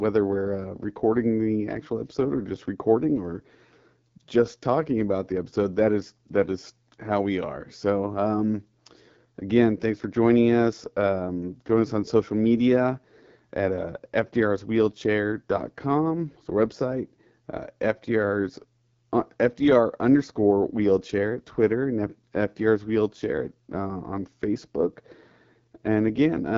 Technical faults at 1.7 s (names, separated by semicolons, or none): AMR wideband (HD Voice) codec